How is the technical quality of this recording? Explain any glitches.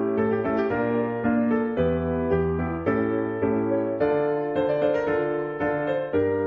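No audible glitches or faults.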